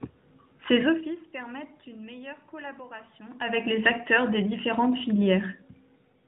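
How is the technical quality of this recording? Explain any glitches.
There are no glitches or technical faults to explain here. The speech has the band-limited sound of AMR-NB narrowband mobile coding, with nothing above 4 kHz and only light coding texture that fits its 12.2 kbps mode, over some background room noise, and its level shifts as the talker moves at about 1 s and again at about 3 s.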